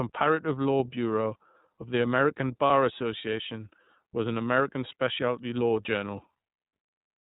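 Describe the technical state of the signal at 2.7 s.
Right around 2.7 s there's a lost iLBC frame, spanning 2.67 to 2.70 s, so about 30 ms of missing audio. The decoder covers the hole by repeating the last pitch cycle with some noise mixed in, so you hear a brief held, slightly buzzy vowel, and the speech snaps back right after because each iLBC frame decodes independently.

Underneath that, the whole clip is going through the iLBC codec, and the damage is plainly audible. It's narrowband, so nothing above 4 kHz survives, and the speech comes across clear but a bit rough and synthetic. The sound fits the 13.33 kbps mode with 30 ms frames.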